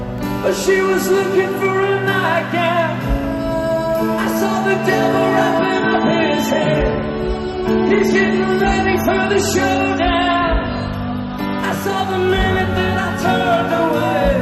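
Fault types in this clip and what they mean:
Hard clipping: Peaks are driven about 6 dB past what the signal path can pass, so their tops are sliced flat. Only a small fraction of samples is hit, giving brief crackle on loud moments throughout, unlike the smoother thickening that soft saturation would give.
Adaptive stream at a lower bitrate: From 5.59 s to 11.59 s the quality drops abruptly, with nothing above 13.4 kHz and stronger codec artefacts, consistent with a step down from about 128 to 32 kbit/s MP3. It then recovers. There is no gap, which rules out a dropout.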